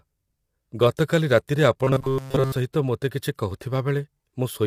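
From the start, the speech has a rough, grainy texture, with noise filling the gaps between pitch harmonics and an artificial-sounding top band that stops near 23.4 kHz. This is low-delay AAC compression, likely AAC-ELD at around 32 kbps. Its short frames resolve harmonics poorly. The graininess, not swirling or warbling, sets it apart from other codecs.

From 1.84 to 2.56 s, the speech becomes robotic sound from repeated short buffers: a rigid metallic buzz at 133 Hz that still loosely tracks the speech. Most of the audio there is replayed about every 7.5 ms, likely because buffers arrived too seldom. Unlike a steady hum, the buzz exists only while speech continues.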